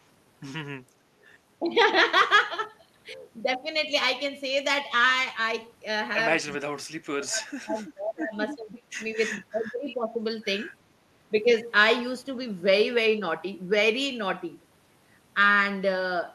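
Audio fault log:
6.51–6.56 s, echo leak. A faint delayed copy of the voice slips in for a brief moment. It trails the original by 337 ms and sits far below it, about 35 dB down. The likely cause is a loudspeaker on the far side. Its echo canceller did not scrub everything its microphone caught, so a trace of this voice travelled back.
1.61–1.7 s, 6.56–8.35 s, 8.55–9.0 s and 9.52–10.21 s, speech suppressed in double talk. The voice dips while the other side is also talking. The first dip is slight, about 5 dB. From 6.56 s the losses grow heavy, up to about 35 dB. Over 8.55–10.21 s they are about 20 to 25 dB. The likely cause is an echo canceller that confused this talker with its own echo and turned both down.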